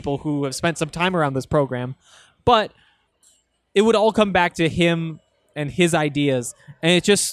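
Nothing technical stands out anywhere in this recording of speech, so there's no fault to point to and no time worth flagging.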